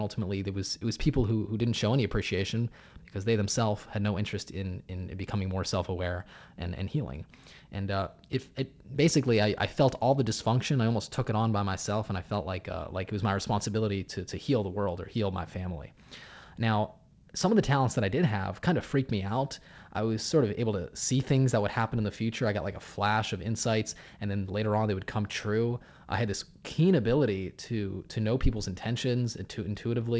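No technical faults can be heard anywhere in this speech recording. It has come through a WebRTC call path working as intended, with nothing above 8 kHz, which fits the G.722 codec, whose ordinary coding noise sits beneath the speech.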